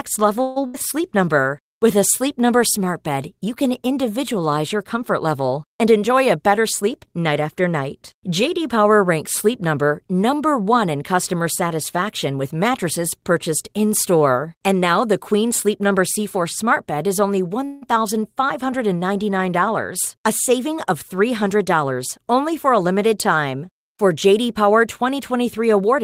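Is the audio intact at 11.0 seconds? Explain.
Yes, at 11.0 seconds the speech plays through intact, with no dropout, click, distortion or other fault at that moment.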